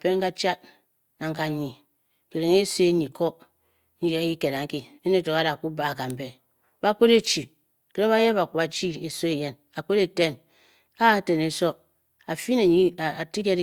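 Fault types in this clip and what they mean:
No technical faults heard.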